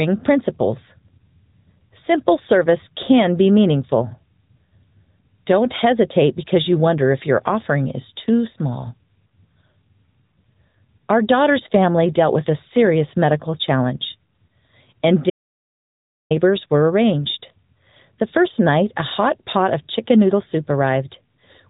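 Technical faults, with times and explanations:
throughout AMR narrowband mobile codec: Nothing reaches above about 3.8 kHz, so the sound is boxed into a phone band, and within it the codec damage is plainly audible as a buzzy, synthetic edge. The codec rebuilds speech from a vocal-tract model excited by a few pulses per short subframe, which fits a mid-range rate near 10.2 kbps. That manufactured buzz is what separates it from simple low-pass filtering, which would dull the sound without making it artificial.
15.30 to 16.31 s audio dropout to silence: For about 1.0 s the sound stops dead and then resumes on "were arranged". The gap is complete silence with no room tone or hiss underneath, so it is not a natural pause in speaking. Because nothing was concealed or faded, it is not a codec glitch either. The likely cause is a lost input, such as a failed link or a momentary disconnect, while the recorder kept writing silence.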